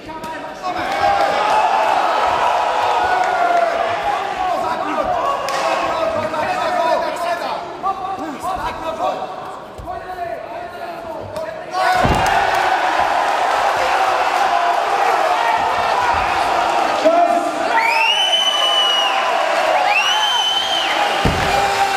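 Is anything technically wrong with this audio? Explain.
No, nothing technically wrong can be heard in this audio. No part of it points to a problem in how the sound was captured, processed or played back.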